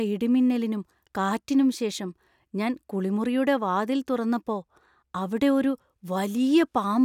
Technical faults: none

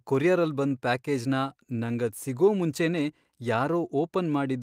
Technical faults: none

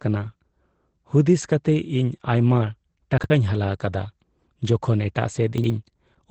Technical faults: Opus voice compression; chunks out of order

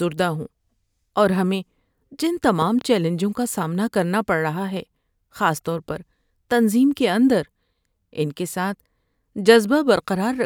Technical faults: loud pop

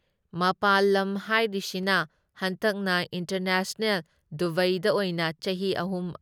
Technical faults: dropped samples

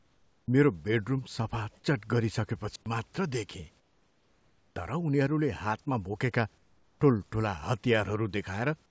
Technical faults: comfort noise in place of the background; digital wireless dropout

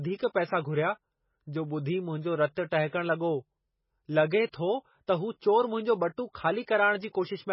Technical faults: MP3 compression; pre-echo

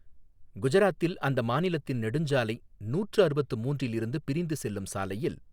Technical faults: none

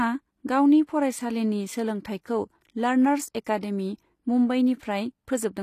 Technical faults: HE-AAC compression

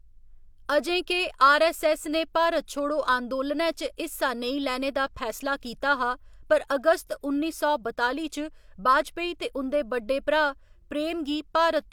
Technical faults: none

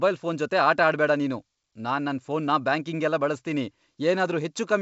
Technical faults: none

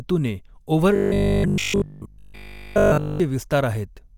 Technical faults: robotic sound from repeated short buffers

